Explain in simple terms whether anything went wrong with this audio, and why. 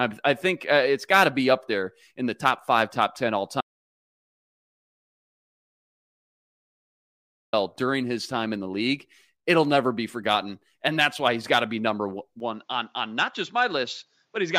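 Audio dropout to silence, from 3.61 to 7.53 seconds: the speech stops dead for almost four seconds and then picks up again at "during his time in". The gap is total silence, with not even the faint background hum of the room. That points to the recorder losing its input, likely a disconnected microphone or a broken link, while it kept writing blank audio. Whatever was said in those four seconds is gone for good.

Input switched to a poorer device, at 12.40 seconds and running to the end: the speech suddenly turns duller and a little quieter, with no pause at the change. Everything above about 7.6 kHz disappears, which takes away the crisp edge on sounds like "s" and "t". The recording most likely switched to a different, lower-quality microphone, one that cannot pick up those higher tones. A faint new background noise comes in too, though it stays well beneath the voice.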